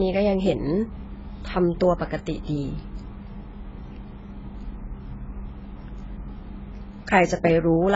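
From start to finish the speech sounds dull and smeared, with nothing above 7.6 kHz and a fizzy, warbling texture on sibilants and held vowels. The likely cause is heavy AAC compression, consistent with AAC-LC at a very low bitrate near 16 kbps, where the encoder drops the top band and coarsely quantises the rest. A simple low-pass filter would also remove the highs, but it would leave what remains clean, without this swirling, metallic grain.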